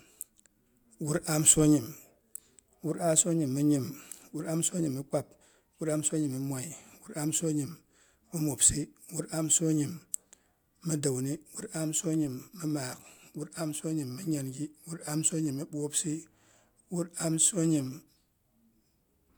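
Nothing goes wrong anywhere in this speech recording, so there's no technical fault to point to at any moment.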